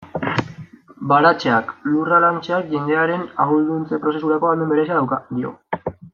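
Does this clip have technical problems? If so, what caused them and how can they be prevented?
Yes. From 3.92 s to the end, a time-stretched section plays about 1.35 times faster. The speech turns rushed but keeps its pitch, unlike a simple speed-up, which would raise it. The likely cause is software cutting out short slices to shorten that stretch. To prevent it, fit timing by editing pauses or re-recording rather than compressing the audio.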